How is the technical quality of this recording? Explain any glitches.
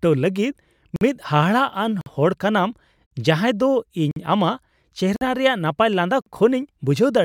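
The speech is broken up by a repeating gap between chunks: six 50 ms silences starting at 0.96, 2.01, 3.06, 4.11, 5.16 and 6.21 s, the fifth ending just before "ᱨᱮᱭᱟᱜ ᱱᱟᱯᱟᱭ". The audio is cut into 1-second chunks, and a fixed stretch of silence sits between each pair, so every join drops out. Nothing is lost from the speech, but it is interrupted at each join, and the steady spacing of about 1.05 s makes the stutter sound mechanical.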